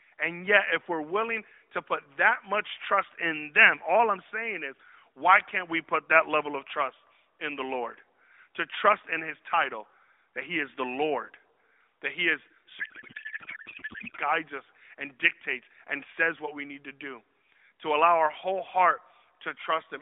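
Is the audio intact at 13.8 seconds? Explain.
No. From 12.80 to 14.18 s, between "that he is" and "guides us and dictates", the speech gives way to garbled noise and warble that barely tracks it. This is a codec payload misread: the AMR frames were packed octet-aligned but unpacked as bandwidth-efficient, so the decoder pulls its parameters from the wrong bit positions and synthesises nonsense until the framing lines up again.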